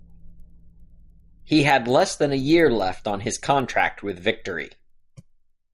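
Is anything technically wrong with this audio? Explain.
Yes. Throughout the speech, a resampler restarted on every block leaves a steady tick at 10 Hz, present only while sound is playing. Each 100 ms block was converted in isolation, which fits a 24 kHz to 48 kHz upsample, so every block edge carries a small interpolation error.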